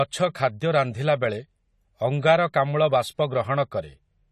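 A speech recording carries plainly audible AAC compression damage from start to finish. Nothing sounds above about 14.1 kHz, and the remaining spectrum has a dull, smeared quality with a fizzy, warbling texture on sustained sounds and sibilants, which fits an AAC-LC encode at around 32 kbps. A plain low-pass filter would dull the top without that shifting, noisy texture below the cut-off, which is what points to a likely codec cause.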